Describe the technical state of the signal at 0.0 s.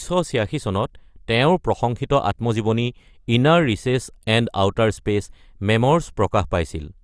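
At 0.0 s the signal is intact, with no audible technical fault.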